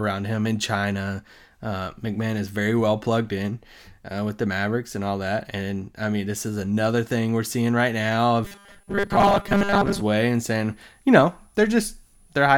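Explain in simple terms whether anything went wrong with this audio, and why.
Two things go wrong near the end of this speech clip.

From 8.21 s, just after "thing we're seeing right", a thin, high whistle near 10 kHz sets in and stays to the end, drifting slightly between 9.9 and 10.1 kHz. This is a switching supply whistle. Unlike steady mains hum, it's very high-pitched and its pitch wanders.

From 8.45 s to 10.02 s, the speech turns into a rigid, metallic buzz pitched at 200 Hz while still loosely following the talking. This is robotic sound from repeated short buffers. Its likely cause is fresh audio arriving too slowly, so tiny slices of roughly 5 ms were replayed over and over and most of the real sound was skipped. Unlike a dropout, the sound never goes silent.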